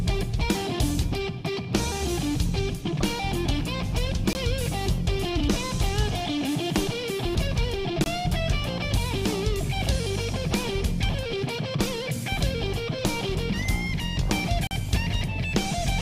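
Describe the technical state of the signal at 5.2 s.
No fault is audible at 5.2 s. The signal there is intact.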